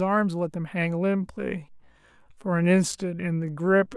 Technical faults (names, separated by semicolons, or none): time-stretched section